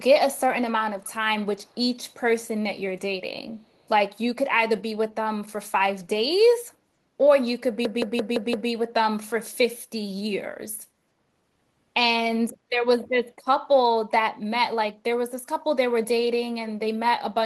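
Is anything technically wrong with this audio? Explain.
Yes, there are two problems in this speech clip.

Echo leak appears at 1.0–1.13 s, 1.57–1.81 s, 2.08–2.15 s and 3.57–3.83 s. The likely cause is a far end on loudspeaker whose echo canceller let some of its microphone pickup through, sending the speech back. You hear brief, faint delayed copies trailing the voice by about 265 ms. They sit well below the main speech, roughly 30 to 40 dB down, as scraps rather than a sustained echo.

The system hang loop runs from 7.85 to 8.70 s. The host or driver stalled while the audio hardware kept replaying the same ring buffer. A 170.67 ms segment, which fits an 8192-sample buffer, repeats exactly five times at 5.86 Hz. Because each segment is fairly long, it comes across as a mechanical stutter rather than a buzz. Once the loop ends, the speech continues with essentially nothing missing.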